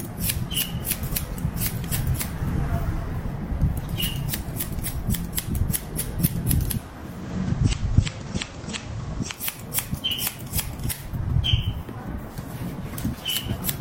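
From 6.98 to 9.54 s, digital radio blends to analogue FM over 354 ms. Hiss appears about 25 dB down.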